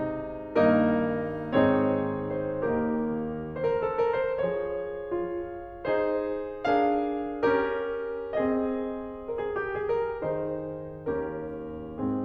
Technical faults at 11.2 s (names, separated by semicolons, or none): none